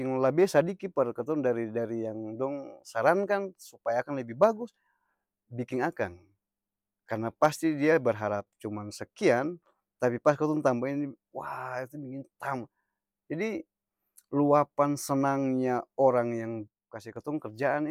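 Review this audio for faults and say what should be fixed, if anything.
One channel drops out at 8.40 to 8.47 s and again at 16.68 to 17.16 s: the speech abruptly falls about 6 dB, then recovers. This is likely one stereo channel briefly going silent, so the mono sum keeps only half the shared signal. Check the cable and connector on each input channel, and keep the channel feeds monitored while recording.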